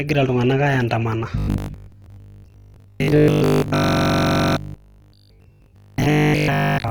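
Throughout the clip, the speech was likely squeezed through Opus in its music (CELT) mode at a rate that points to roughly 16 kbps. Bands starved of bits get filled with noise, so the full band to 20.2 kHz sounds plainly rough and grainy.

From 1.38 s to 6.90 s, new audio likely reached the player too rarely, so it kept replaying the last 20 ms piece and skipped the real signal for most of this stretch. This robotic sound from repeated short buffers forces a rigid, metallic 50 Hz buzz.

From 3.84 s to 4.57 s, a system hang loop occurs: the machine froze while the sound hardware kept cycling one ring buffer, which fits a 2048-sample buffer. A 42.7 ms chunk repeats 17 times at 23.4 Hz, a machine-gun stutter replacing about 0.7 s of audio.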